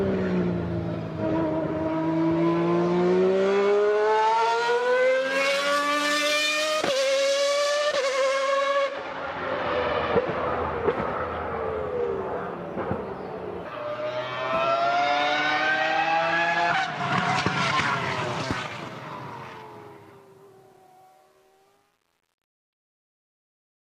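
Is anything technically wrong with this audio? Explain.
Yes. From 17.88 s to the end at 23.82 s, the fade-out suffers truncation distortion on a fade. The gain stage drops low bits without dither, consistent with roughly 9-bit resolution. From 19.19 s onward, the tail turns gritty.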